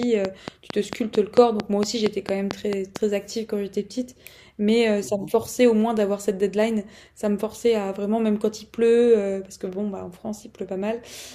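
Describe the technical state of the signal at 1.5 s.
At 1.5 s the speech sits inside a train of clicks running from 0.03 to 2.97 s. Near-identical pulses arrive regularly, 4.43 per second, around fifteen in all. They poke well above the speech, likely from electrical interference or a faulty connection or power supply, and tick through pauses too.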